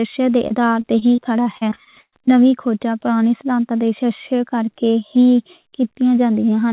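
From 0.48 to 2.31 s the speech breaks up with repeated packet loss (robotic sound). Eleven short holes, the longest about 119 ms, are each patched by stretching the last sound, so roughly 18% of that span is filled-in tone rather than real speech, giving a choppy sound with pieces missing until clean speech resumes at "نویں کھوجاں پرانی سدھانتاں". Unlike a single dropout, the gaps recur in quick succession, all within the narrowband call sound that stops at 4 kHz.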